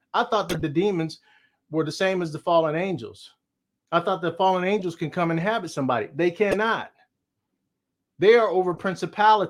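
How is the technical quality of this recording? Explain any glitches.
Four short glitches interrupt the speech. Each is a corrupt frame decoded. They occur at 0.49–0.62 s, after "I thought"; 4.79–4.84 s, after "I thought the fallen"; 6.51–6.56 s; and 8.74–8.80 s. Damaged compressed frames were decoded anyway, placing energy at wrong frequencies. Each sounds like a brief chirp or noise burst. The first and third peak near about -10 dBFS. The others are fainter.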